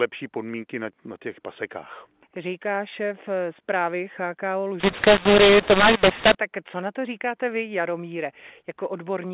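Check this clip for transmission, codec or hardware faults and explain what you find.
One fault, within 8 kHz G.711 mu-law telephone speech. From 4.8 to 6.35 s, ending just before "tak co na to", mu-law and A-law are mixed up. The mu-law bytes are expanded with the A-law curve, scrambling sample levels and lifting the quietest samples, so the speech turns harsh and distorted and its pauses fill with noise.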